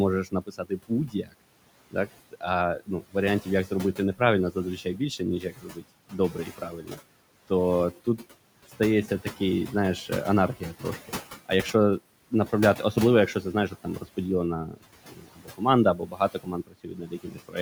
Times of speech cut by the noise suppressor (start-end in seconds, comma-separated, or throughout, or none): 0.24-1.34, 1.91-7.51, 10.09-11.74, 12.31-17.57